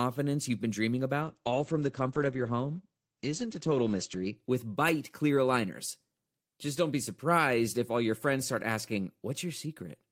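From 1.22 s to 4.41 s the speech goes through a call bitrate drop. The connection's bandwidth estimate fell, so the encoder was told to spend far fewer bits. The sound points to a fall from around 32 kbps to roughly 11 kbps. The low point lasts about 3.05 s. Coding turns coarse and rough. The audio band shrinks from 20 kHz to 8 kHz, so the top end vanishes and the speech sounds muffled until the rate recovers.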